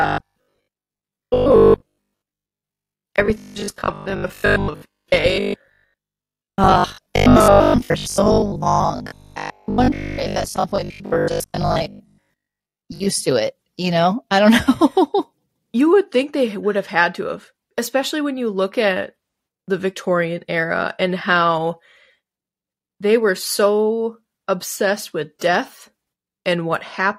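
From 0.02 s to 13.08 s the speech takes on robotic sound from repeated short buffers: a rigid, metallic 50 Hz buzz that still roughly tracks the talking, clearing just before "to it you know". The likely cause is audio arriving too slowly, so short chunks are replayed in place of the missing sound for much of that stretch. A 50 Hz buzz fits chunks about 20 ms long. Unlike ordinary dropouts, nothing goes silent. The gaps are filled with a fixed-pitch stutter.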